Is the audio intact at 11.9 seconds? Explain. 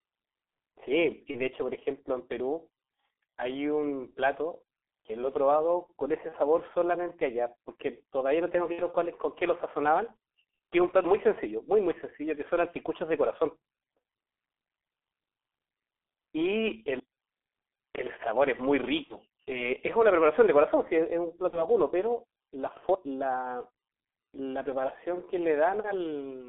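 No. At 11.9 seconds the speech sounds muffled and hoarse, with smeared consonants, and this holds across the whole clip rather than at that moment alone. The cause is heavy G.723.1 codec damage. The signal sits in a telephone band of roughly 300 Hz to 3.5 kHz, and its spectral model refreshes only once per 30 ms frame. The coarse, rough quality points to a very low bitrate, near 6 kbit/s.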